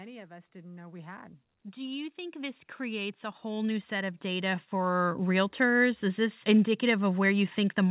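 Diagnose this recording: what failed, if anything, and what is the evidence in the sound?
The automatic gain rising happens in the call processing stage. Starting at 0.27 s the level climbs steadily until 5.47 s, ending about 20 dB up. The voice and the background noise swell together over that stretch, so it isn't the talker getting louder. The AGC judged the input too quiet and raised its gain gradually. The band stops at 4 kHz, which fits a G.711 A-law call leg.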